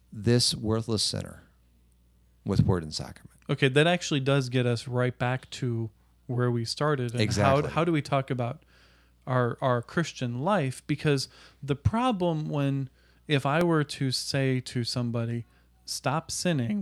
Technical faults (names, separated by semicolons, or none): repeated buffer